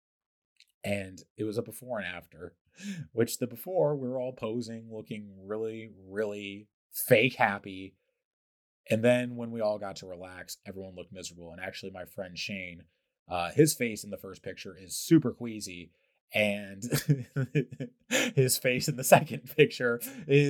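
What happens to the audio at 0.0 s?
Nothing goes wrong at 0.0 s; the audio is intact there with no audible fault.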